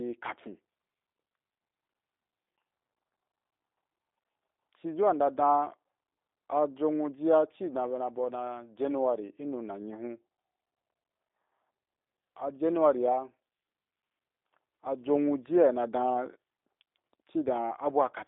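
G.729 codec damage runs throughout: speech rebuilt from a filter and sparse pulses, cut above 3.7 kHz, rough and synthetic, fitting an 8 kbit/s stream.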